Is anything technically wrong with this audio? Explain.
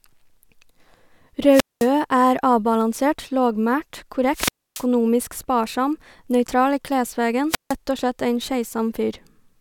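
Yes. The speech has three wireless microphone squelch dropouts: 1.50 to 1.89 s, with a 210 ms mute; 4.32 to 4.86 s, right after "avbalansert lågmælt" and before "sparsam nøytral i", muting for 278 ms; and 7.49 to 7.75 s, a 157 ms mute ending at "og slett ein". Each time, the FM radio link weakens, hiss swells briefly, and the receiver's squelch gates the output to near silence until the signal recovers and the speech returns.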